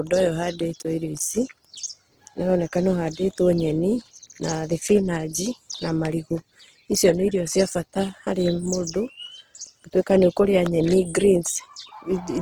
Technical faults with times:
0.00-12.42 Opus compression

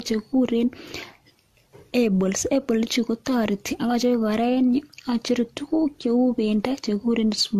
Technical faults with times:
0.00-7.59 generation loss

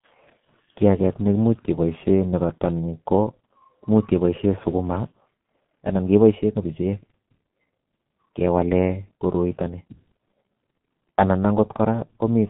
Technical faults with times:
0.00-12.49 G.723.1 codec

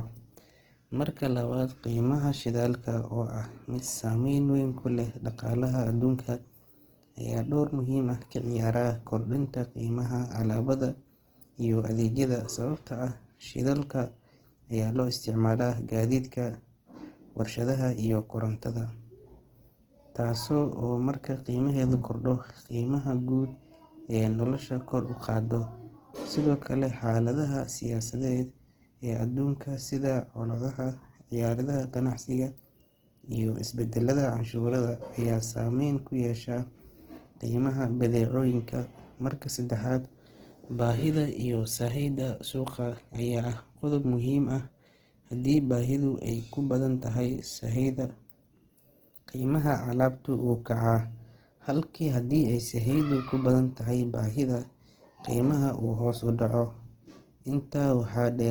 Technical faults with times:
0.00-58.50 Opus compression

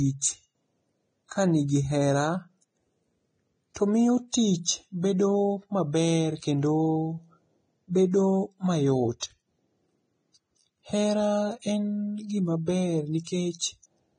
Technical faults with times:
0.00-14.18 Vorbis compression
3.74 pre-echo
4.32-4.34 pre-echo

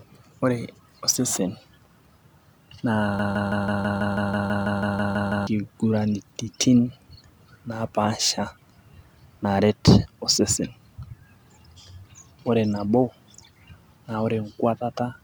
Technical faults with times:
3.19-5.47 broken-record loop

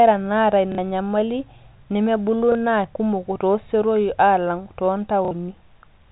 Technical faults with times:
0.72-0.78 packet loss with last packet repeated
2.52-2.55 packet loss with last packet repeated
5.25-5.31 packet loss with last packet repeated

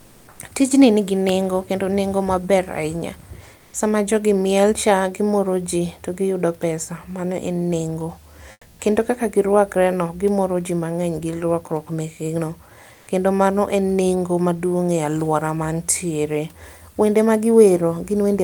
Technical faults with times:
0.00-0.39 comfort noise in place of the background
3.57-3.73 comfort noise in place of the background
8.51-8.79 comfort noise in place of the background
12.93-13.07 comfort noise in place of the background

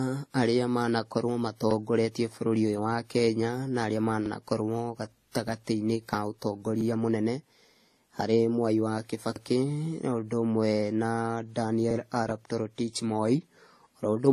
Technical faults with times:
0.00-14.32 transcoding between lossy codecs
9.36-9.41 overlapping chunks

